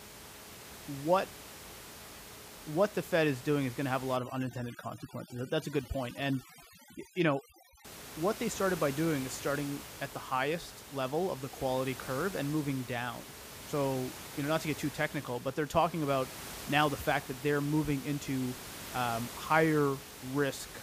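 From 4.17 to 7.85 s the speech passes through overdone noise removal: a noise reducer set far too strong pulls individual frequency bands down or out wherever they sit near its noise estimate, taking quiet speech detail with them. The room noise, about 14 dB below the speech elsewhere, collapses into near silence dotted with twinkling specks. On a spectrogram the background shows as black gaps scattered with isolated bright dots, and speech harmonics look ragged and broken.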